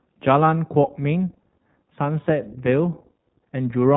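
Speech coded through the iLBC codec throughout: nothing passes above about 3.9 kHz, and the plainly audible roughness, which fits 20 ms frames at about 15 kbps, sets it apart from simple low-pass filtering.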